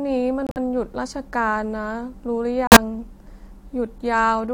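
Corrupt frames were rejected by the decoder and muted: damaged compressed data was dropped and replaced with silence, so the speech cuts abruptly to nothing at 0.47 s for 0.11 s and again at 2.67 s for 0.09 s. Each gap fits a few lost frames, and the timing after each gap stays intact.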